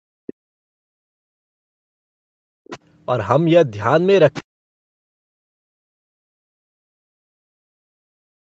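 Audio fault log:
0.00–2.59 s, 4.42–6.89 s and 7.30–8.41 s: speech suppressed in double talk. The voice sinks by as much as around 40 dB, for roughly two seconds in each of the first two spans, likely because the echo canceller, unable to separate talker from loudspeaker echo, turned both down.
0.27–0.33 s, 2.65–2.79 s and 4.33–4.42 s: other side's voice leaking through. Short scraps of a second voice sit roughly 15 to 20 dB below the talker, likely loudspeaker playback that the echo canceller failed to fully remove from the microphone signal.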